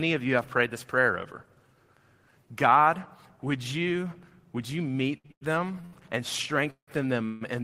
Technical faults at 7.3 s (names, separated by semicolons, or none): call audio freeze